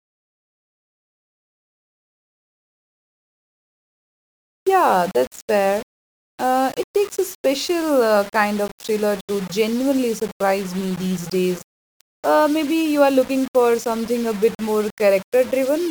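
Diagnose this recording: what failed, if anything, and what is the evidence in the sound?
The speech carries grainy, signal-tracking distortion from start to finish: the grit rises and falls with the voice, quiet syllables turn rough, and the softest passages sputter or drop out rather than sitting on a steady hiss. That is low bit depth without dither, likely introduced at a sample-format conversion where samples were rounded to very few levels, consistent with roughly 5 bits. The resulting error sits only about 20 dB below the signal.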